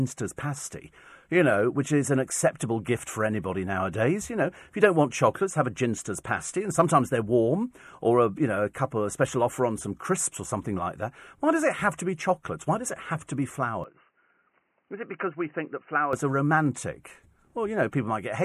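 Speech that abruptly turns dull and boxy from 13.84 s to 16.13 s, with nothing above 3 kHz, a drop of roughly 5 dB, faint new background noise and no gap at the changeover, then clears again. The likely cause is an input switched to a poorer device.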